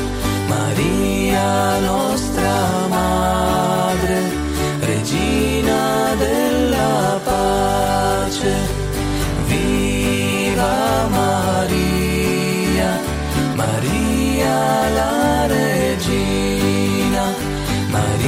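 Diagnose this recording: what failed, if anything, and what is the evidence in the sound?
Nothing failed; no stage shows any audible fault.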